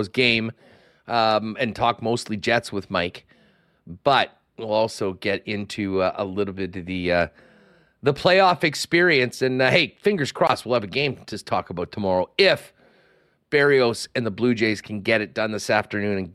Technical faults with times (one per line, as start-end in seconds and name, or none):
none